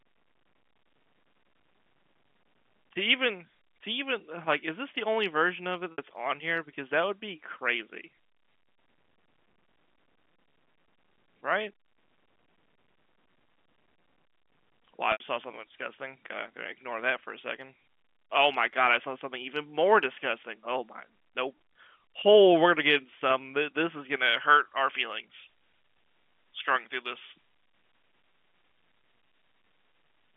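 At 5.92 s and again at 15.12 s, packet loss with pitch repetition: gaps of 60 ms and 80 ms were bridged by repeating the last pitch period, giving brief held, buzzy smears. From 24.16 s to the end, pre-emphasis was left on: a J.17 treble boost, about 11 dB at 10 kHz, was never undone, so the narrow telephone-band speech of the G.711 line turns thin, bright and hissy.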